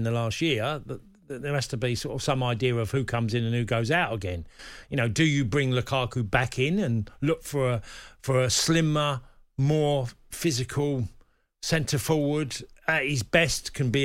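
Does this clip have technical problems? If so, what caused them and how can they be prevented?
No, nothing stood out as a technical problem on listening to this speech recording.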